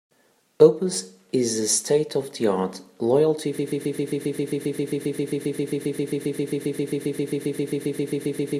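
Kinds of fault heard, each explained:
Broken-record loop: From about 3.59 s to the end, the speech collapses into one fragment of roughly 0.13 s repeating exactly and back to back, some 38 times, giving a rapid stutter with no new material. Whatever should have been heard in those last five seconds is gone. The likely cause is a stall in the player, encoder or stream, which kept resending the last short fragment it held instead of advancing.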